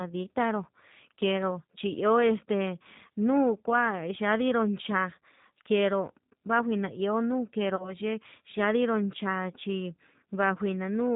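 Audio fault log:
Throughout, G.729 codec: the speech has a slightly rough, synthetic edge, and nothing above 4 kHz survives, so sibilants and breathy detail are dulled. The damage is plainly audible and fits an 8 kbit/s coder that does not send the waveform itself. Each 10 ms stretch is rebuilt from a vocal tract filter, a pitch predictor and a handful of pulses, which accounts for the buzzy, reconstructed texture.
7.76 to 7.95 s, VoIP packet loss concealed by the speech codec: about 30 ms of audio goes missing, which points to a single lost packet. The decoder covers the gap by repeating its last pitch and filter settings at falling gain, so the sound smears into a brief, fading stretch of stretched-out sound. Because each frame is built on the one before, the speech stays weak or distorted until about 7.95 s, well after the gap itself ends.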